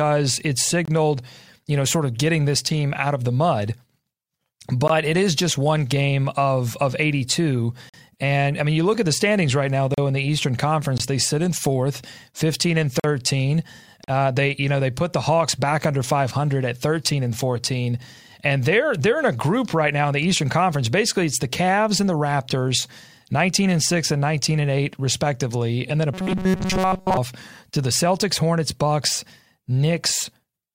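Gaps between stream segments cut hard-edged silences into the speech at 0.85–0.88, 4.88 (just before "it is just one"), 7.89–7.94, 8.94, 9.94–9.98, 10.98–11.00 (before "they sit in fourth"), 13.00–13.04 and 14.04–14.08 s, recurring on one-second segment boundaries. From 26.14 to 27.17 s, between "respectively and then a" and "to the", the speech becomes a rigid metallic buzz at 188 Hz, robotic sound likely from repeating short buffers of about 5.3 ms while most of the real audio is skipped.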